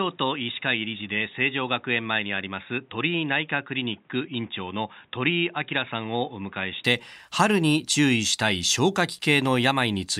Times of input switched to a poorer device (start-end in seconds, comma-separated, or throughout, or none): 0.00-6.85